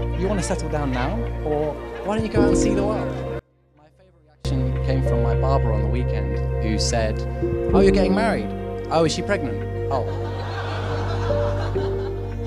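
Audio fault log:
3.39–4.45 s, one channel inverted: for about a second the level collapses by about 33 dB, leaving a faint residue where the full sound was. The likely cause is one stereo channel flipping polarity, so when the two channels are summed to mono, everything they share cancels. Centre-panned material and the low end, which are usually common to both sides, are removed; only the small left-right difference survives.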